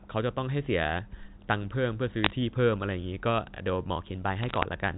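Bit errors on a digital phone line strike from 2.24 to 2.31 s and again from 4.43 to 4.63 s, over the speech carried by G.711 mu-law telephone coding. On the line, individual bits were flipped, each corrupting a single 8-bit sample; when a high-order bit or the sign of a loud sample is hit, that sample jumps far from its true value, giving a sharp tick. At an error rate of a few tenths of a percent, these ticks cluster into brief bursts of crackle.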